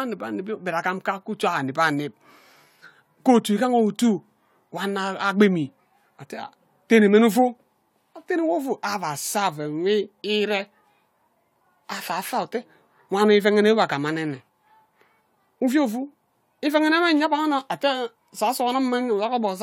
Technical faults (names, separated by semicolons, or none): none